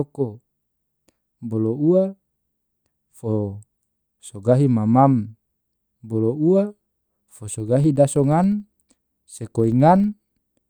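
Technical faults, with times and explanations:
7.4 s to the end: filter restarted on every block. The filter drops its stored state every 40 ms and starts each block from silence, leaving a 25 Hz buzz of small ticks. Unlike steady mains hum, this buzz rises and falls with the speech level.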